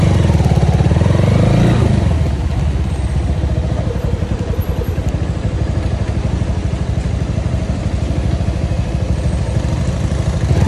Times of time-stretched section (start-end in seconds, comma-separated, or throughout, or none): none